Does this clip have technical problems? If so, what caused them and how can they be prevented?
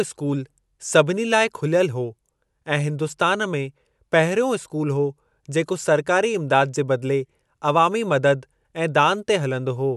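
No, this clip has no technical problems, so there is nothing to trace to a cause or prevent.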